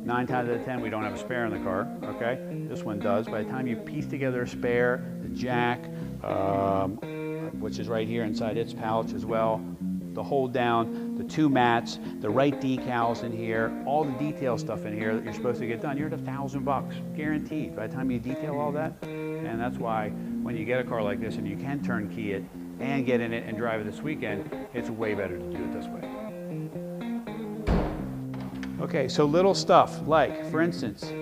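A short burst of processor overload crackle runs from 18.85 to 19.05 s. For about a fifth of a second the processor fails to deliver a handful of very short buffers on time, each well under a millisecond, and every miss drops to silence with hard edges, producing a gritty tearing over the sound. On a waveform this shows as tiny notches cut to zero; on a spectrogram, as thin vertical broadband streaks clustered in that window.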